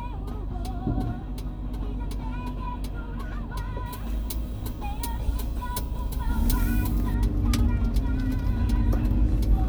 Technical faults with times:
3.86-7.14 pre-emphasis left on

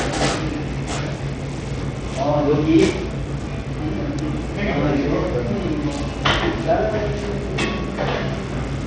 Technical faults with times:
0.00-8.87 Bluetooth SBC compression

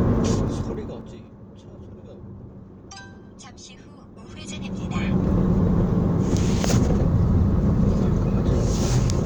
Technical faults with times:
0.28-1.30 zipper noise
4.09-5.29 zipper noise

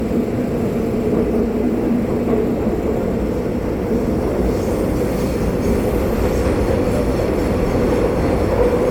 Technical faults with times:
0.00-8.91 generation loss

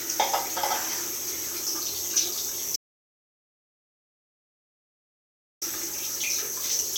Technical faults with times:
2.76-5.62 audio dropout to silence

